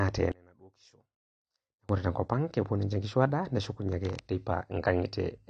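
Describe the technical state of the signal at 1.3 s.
At 1.3 s the signal sits inside a stretch of one channel inverted, running from 0.32 s to 1.89 s. One side of the stereo pair has most likely had its polarity flipped, so when the two channels are folded to mono the shared centre content cancels. The speech falls by about 30 dB, leaving only a faint residue of whatever differed between the channels, as if it had dropped far into the background.

Across the whole clip, and so at 1.3 s too, there is AAC compression damage, likely from AAC-LC encoding at a low rate, which fits a bitrate around 32 kbps. The encoder spends too few bits to keep the full spectrum, so nothing remains above 9.4 kHz and the upper bands are patchy. The speech sounds dull and muffled, with a plainly audible smeared, warbling texture on sustained sounds and a fizzy edge on sibilants.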